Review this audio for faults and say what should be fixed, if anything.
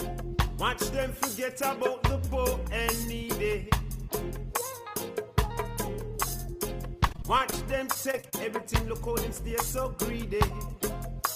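Repeated packet loss (robotic sound) occurs from 7.07 to 7.54 s and again from 7.94 to 8.34 s. Short gaps up to about 30 ms are patched by stretching the previous sound, so it turns choppy with pieces missing. To prevent it, use a more stable network path or a larger jitter buffer.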